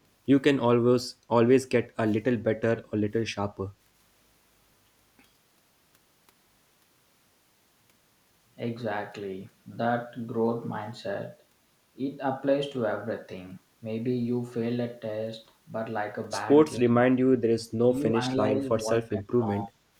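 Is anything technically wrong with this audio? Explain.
Yes. From 18.81 to 19.45 s and again from 19.66 to 19.83 s, the speech is pulled down by roughly 25 dB, in short broken stretches. The likely cause is speech suppressed in double talk: an echo canceller, faced with both sides talking, attenuated this talker too. A waveform would show the envelope collapsing in chunks, and a spectrogram would show energy thinning, especially up high.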